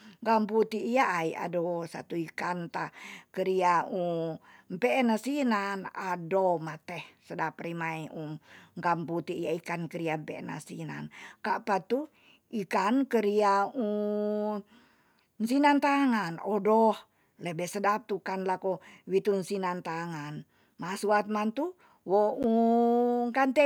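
At 22.43 s the speech drops out for about 11.6 ms. This is a block of digital silence. A run of samples was replaced by silence, and the length fits a 512-sample buffer that was not filled in time. The signal stops dead and restarts with no fade. Because the hole is so brief, it is heard as a tick or dip rather than an audible gap.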